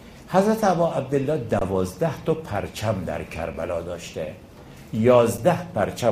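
Three underruns with held sample interrupt the audio. At 1.59 to 1.61 s the waveform freezes flat for 23 ms, which fits a 1024-sample buffer. Shorter 6 ms holds follow at 3.54 s and 5.38 s. Playback resumes where it stopped, so each gap ends softly.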